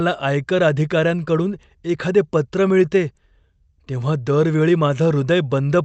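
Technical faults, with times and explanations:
Nothing here stands out as a technical fault; the speech comes across the way a normal call does, with the top end stopping around 8 kHz, which fits an Opus call path at a modest bitrate.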